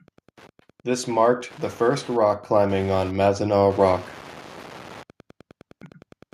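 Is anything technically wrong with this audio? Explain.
Yes, two faults are audible in this speech recording.

Wi-Fi interference runs through the entire clip. A nearby Wi-Fi radio couples into the audio circuitry, which rectifies its beacon transmissions. The beacon repeats every 102.4 ms, so the result is a steady ticking just under ten times per second, sitting roughly 25 dB below the speech.

The automatic gain rises from 0.84 s to 3.7 s. The automatic gain control judged the input too quiet and gradually increased its gain, by about 6 dB over nearly three seconds. The amplification applies to the whole signal, so the voice and the background swell together. The level creeps upward instead of holding steady.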